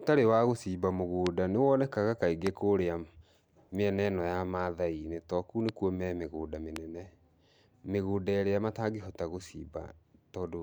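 Loud pops sit at 1.27–1.29 s, 2.47–2.49 s, 5.69–5.71 s and 6.76–6.78 s. Each is a single sharp click over continuing speech, the first about 20 dB above it and the rest about 15 dB. Each is likely a brief voltage spike entering the signal chain.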